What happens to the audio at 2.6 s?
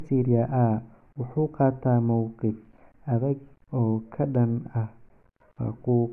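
Nothing goes wrong at 2.6 s: the speech there plays through intact, with no dropout, click, distortion or other audible fault.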